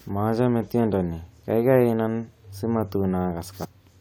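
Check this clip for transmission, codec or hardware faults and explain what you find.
One fault, near the end of the speech. At 3.63 to 3.65 s, damaged data in a compressed stream made the decoder lose frame sync, causing a brief glitch.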